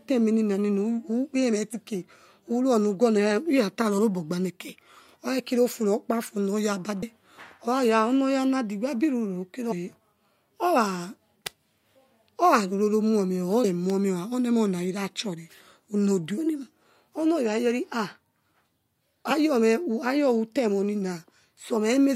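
Speech clip with compressed frames skipped at 1.72, 3.97, 7.01 (just after "kira ofu rokpafu onoya"), 9.71 to 9.73, 13.63 and 19.30 s. At each point the decoder drops whole frames of about 23.2 ms, which points to 1024-sample frames at 44.1 kHz. It is either missing them or rejecting them as corrupt, so the audio jumps forward by roughly 50 ms, or about 100 ms at 7.01 and 9.71 s.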